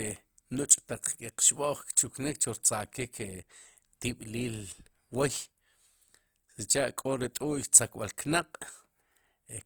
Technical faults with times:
0.00-9.65 Opus compression

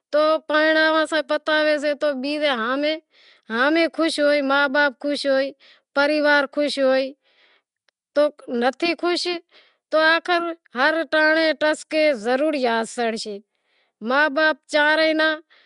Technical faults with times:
0.00-15.65 Nellymoser compression

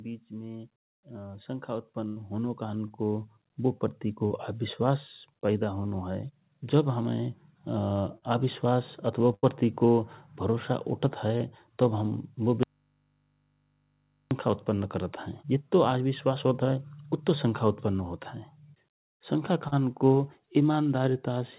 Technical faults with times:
0.29-4.48 automatic gain rising
2.08-2.18 burst of packet loss
2.88-2.92 short concealed packet loss
4.28-4.32 short concealed packet loss
8.18-8.24 short concealed packet loss
9.34-9.45 burst of packet loss
11.38-11.42 short concealed packet loss
12.63-14.31 audio dropout to a faint residue
19.68-19.74 short concealed packet loss

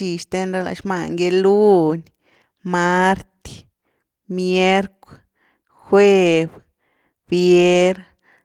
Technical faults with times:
none

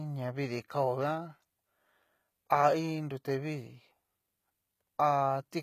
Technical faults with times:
0.00-5.62 HE-AAC compression

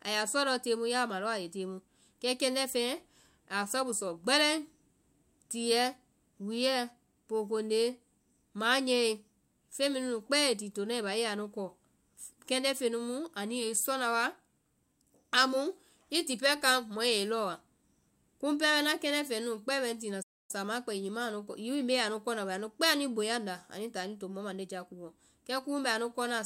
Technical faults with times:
20.22-20.51 playback stall

